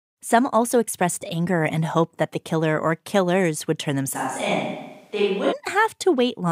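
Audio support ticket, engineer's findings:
Close mic signal likely lost, recording falls back to a distant microphone, 4.16–5.51 s, right after "killers would turn". Speech turns roomy and hollow at once, less bass, level down about 5 dB, room noise rising to about 35 dB below speech. Sudden switch both ways.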